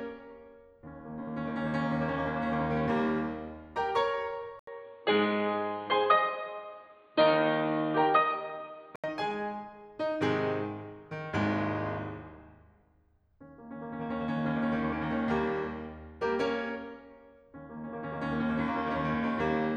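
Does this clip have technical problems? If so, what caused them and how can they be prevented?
Yes. From 4.59 to 9.04 s the music turns dull, with nothing above 4.5 kHz, after an 80 ms gap. The level shifts by around 5 dB and faint new background noise appears. This is likely an input switched to a poorer device. The gap, level jump and changed noise floor set it apart from a simple low-pass filter. Lock the recording input to one device and disable automatic switching.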